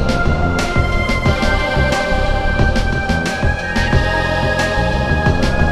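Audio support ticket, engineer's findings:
Corrupt frame decoded at 1.36 s. Short chirp-like blip, peaking at around -20 dBFS. Probable component: codec decoder. Damaged bits in a couple of compressed frames got played as valid. Misread gains and codes put energy at wrong frequencies. Burst lasts roughly two frame lengths. Check transport error detection and frame concealment.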